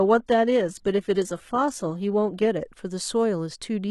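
From 0.0 to 2.5 s, an adaptive stream starting at a low bitrate gives dull, swirly speech, consistent with about 16 kbit/s HE-AAC; the spectrogram's treble then snaps to full, AAC-LC-like band.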